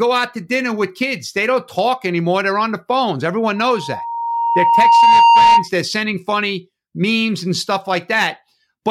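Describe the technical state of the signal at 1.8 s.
At 1.8 s the speech comes through intact, with no dropout, distortion, glitch or other fault audible at that point.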